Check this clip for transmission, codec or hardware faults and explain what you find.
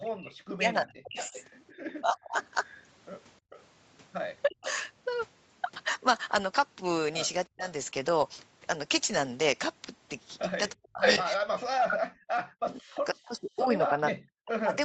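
Two kinds of fault recur through the speech, both typical of a speakerphone call, heard over a band that stops at 8 kHz as the call path normally does.

Speech suppressed in double talk: the voice sinks by about 40 dB or breaks into pieces from 0.0 to 2.37 s (roughly one and a half seconds of it lost), again at 4.46 to 4.69 s and 7.46 to 7.65 s, and from 10.71 s to the end. The likely cause is an echo canceller that heard both sides at once and, unable to tell the local talker from loudspeaker echo, turned everything down.

Echo leak: a delayed copy of the voice trails the speech from 1.16 to 3.62 s, 362 ms behind and about 15 dB quieter, with a brief scrap at 4.65 to 4.72 s, about 10 dB down. From 10.98 to 11.96 s a copy 499 ms late sits about 5 dB above the speech itself. This likely comes from the far end's canceller failing to strip its loudspeaker from its microphone, so the leftover was sent back.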